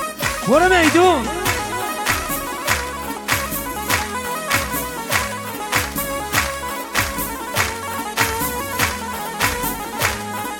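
From 2.54 to 6.18 s there is a block size mismatch, truncated. Each block's end is dropped, causing a 91.9 Hz buzz. Speed stays at 1.0x.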